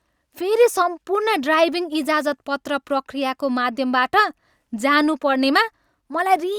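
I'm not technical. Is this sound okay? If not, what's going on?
Yes, this speech recording sounds fine, and there's nothing here you need to worry about.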